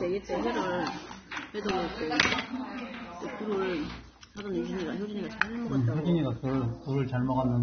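The whole clip is dull, with nothing above 6.3 kHz and a smeared, fizzy texture, likely heavy AAC compression at a low bitrate around 24 kbps.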